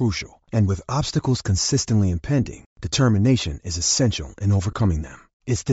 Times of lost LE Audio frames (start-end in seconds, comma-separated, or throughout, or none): 0.48, 2.44-2.46, 4.71-4.73